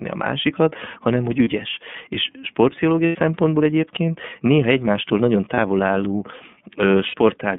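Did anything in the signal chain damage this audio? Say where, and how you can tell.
Yes. The codec stage damaged the whole clip. The speech is band-limited to roughly 150 Hz to 3.5 kHz, with nothing above. It sounds clear but plainly rough and synthetic. That fits the iLBC codec at about 13.3 kbps, with 30 ms frames.

The network stage caused lost iLBC frames at 1.44, 3.06 to 3.16, 5.54, and 7.07 to 7.15 s. Each gap becomes a held, buzzy vowel, about 30, 90, 30 and 60 ms long. The decoder repeats the last pitch cycle with noise. Speech recovers at once because frames stand alone.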